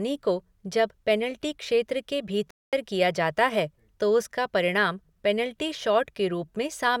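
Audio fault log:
2.51–2.73 s, Bluetooth stall: right after "जब पेनाल्टी क्षेत्र के" the speech drops to silence for about 222 ms, then resumes with "किया जाता है तो". This is likely a stall where interference delayed packets, the headphones' buffer emptied, and playback waited for the resent audio.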